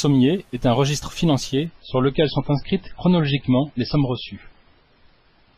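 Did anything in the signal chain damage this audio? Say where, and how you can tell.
Yes, at the network stage. From 1.66 s, right after "est un registre", the speech abruptly loses everything above 5.5 kHz and turns swirly, with no gap, until the end. This is an adaptive stream at a lower bitrate. A slowed connection forced a switch, which fits a drop from about 128 to 16 kbit/s MP3.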